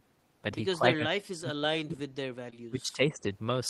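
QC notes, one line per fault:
0.78–2.03 s, speech suppressed in double talk: the talker sinks by about 35 dB at the deepest, with roughly a second of it ducked in patches. It's likely the echo canceller hearing both ends at once, failing to tell its own talker from the loudspeaker echo, and pulling everything down.
1.59–1.69 s, short concealed packet loss: 20 ms went missing and 21 ms was synthesized from the preceding sound, stretching things by a few milliseconds. It lands inside the ducked stretch, so it comes through as a brief smear rather than a gap.
2.50–2.55 s, short concealed packet loss: another 20 ms hole, this time covered with 17 ms of continued audio, so the timeline shifts by around 10 ms. You get a quick wobble where the decoder extrapolates and then crossfades back to real audio.
2.68–3.27 s, speech suppressed in double talk: a milder dip, about 15 dB down, covering around half a second. 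Same likely cause: both sides talking at once, with the canceller pulling the level down because it can't separate echo from the talker.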